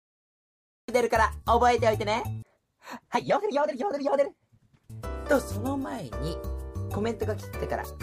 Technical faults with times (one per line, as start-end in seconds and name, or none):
0.00-0.88 cut-off start